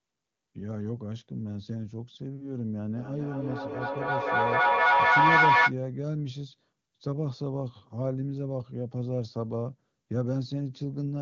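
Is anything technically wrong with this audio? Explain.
Yes, there is a feedback howl from 2.95 to 5.75 s. Two devices in the same room are on the call, so each trip from loudspeaker back into microphone returns louder. The sound narrows to the frequency the loop favours, around 1 kHz, and swells to about 11 dB above the speech, with the loop repeating roughly every 300 ms. A spectrogram shows a bright horizontal band near 1 kHz. The waveform swells into a dense block.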